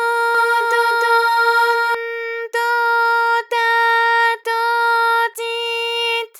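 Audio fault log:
0.35–1.95 s, doubled audio track: a second full-band copy of the sound runs about 300 ms behind the original at roughly the same level, so every onset is heard twice with a fixed gap. The repeat carries no decay or room colour, unlike a reflection, and it cuts in and out abruptly at the range edges. This is likely caused by the signal being captured again through a slower path, or an edit leaving two copies out of step.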